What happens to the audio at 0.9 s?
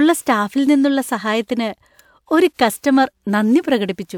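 Nothing goes wrong at 0.9 s; the speech there comes through intact, with no dropout, glitch or distortion.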